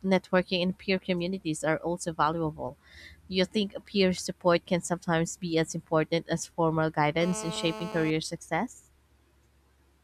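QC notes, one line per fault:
7.21–8.11 s, GSM phone buzz: Right after "as important as formal", a hard, raspy 217 Hz buzz enters, about 11 dB below the speech. It holds steady, as during a call. The audio circuit rectifies a nearby 2G phone's radio bursts, producing dense harmonics.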